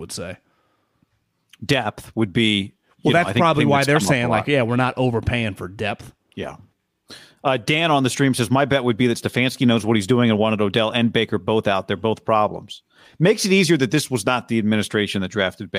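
Listening to this speech recording, nothing stood out as a technical problem at any point.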